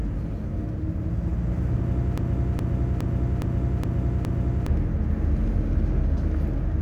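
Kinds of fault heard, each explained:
Broken-record loop: from 2.18 s to 4.68 s, a 0.41 s fragment of the sound plays six times back to back, each pass identical, then normal audio resumes with the intervening material missing. The likely cause is a player or stream that stalled and kept resending its last buffered fragment. Unlike an echo, the repeats don't fade or overlap, and unlike a brief stutter, the loop holds steady for seconds.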